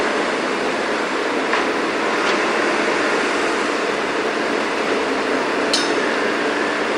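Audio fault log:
No technical fault can be heard anywhere in the sound, and the signal holds steady in level and continuity throughout.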